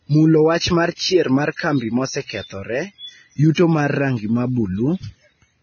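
A speech recording with heavy, constant coding damage. The treble is missing above 6.5 kHz. What remains sounds hissy and grainy, with roughened tones. This is likely Vorbis compression at a very low bitrate, around 17 kbps. The coarse treble quantisation turns fine detail into noise. Pre-echo occurs twice, from 1.56 to 1.59 s and from 3.55 to 3.57 s. A short hiss of about 31 ms and 27 ms precedes each attack. The codec's noise spreads back before the sharp onset, so the attack sounds smeared.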